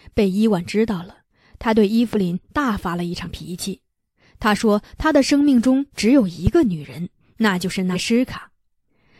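At 2.13–2.16 s a loud pop rises about 10 dB above the speech, likely a voltage step from a plug, switch or static discharge. On the waveform it is a single sharp spike, and on the spectrogram a thin vertical stripe across all frequencies, with the speech continuing underneath.

At 3.23–3.27 s compressed frames are skipped. About 50 ms of audio is missing, which fits one dropped 46 ms frame. The join is visible as a small discontinuity in the spectrogram's harmonic lines.

A second loud pop at 6.47–6.49 s is stronger, about 15 dB above the speech, and shows the same full-band vertical line and waveform spike.

At 7.92–7.96 s roughly 150 ms is skipped, consistent with three lost frames. The speech jumps ahead, and the speech contours break abruptly at that point.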